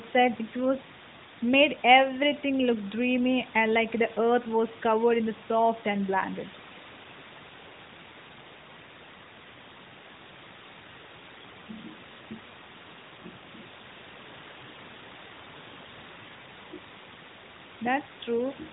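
At 11.36 to 11.43 s, AMR bit errors corrupt a short stretch of frames, about three 20 ms frames judging by its length. Around one bit in twenty in the less protected parts of each frame arrived flipped, while the check on the critical bits still passed, so the decoder used them. The excitation pulses landed in the wrong places and the finer pitch, gain and spectral values drifted. The speech keeps roughly its pitch and level but turns briefly hoarse and gargly, a scratchy smear within the narrowband band-limited sound.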